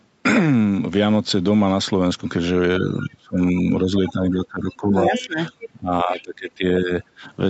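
From 2.8 to 3.92 s and again from 4.1 to 6.64 s, the level drops sharply, by up to roughly 30 dB, likely speech suppressed in double talk. On a spectrogram, the harmonics fade and break into gaps; the waveform envelope caves in. Within the second stretch, at 4.71–4.76, 5.14–5.25 and 5.6–5.68 s, brief scraps of another voice leak through, likely the other side's voice getting past the echo canceller. The loudest is only about 10 dB below the talker, and they show as streaks. Shorter, shallower dips of about 10 dB follow at 6.81–6.92 and 7.18–7.23 s.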